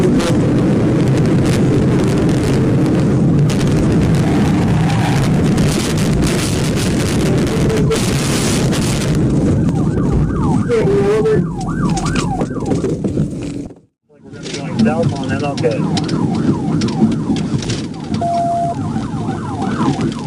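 Skips at 5.71, 9.69, 13.67 and 17.65 s, about 4 s apart, likely audio missing between chunks: roughly 20 ms dropped at each handover, edges butted together.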